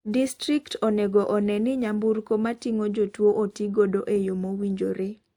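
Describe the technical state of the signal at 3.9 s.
At 3.9 s the speech carries layered codec artefacts that run through the whole clip. The likely cause is transcoding between lossy codecs. The sound points to Opus at 48 kbit/s re-encoded as WMA at 96 kbit/s. WMA spends bits on the Opus artefacts and adds its own. The bandwidth still reaches about 20 kHz.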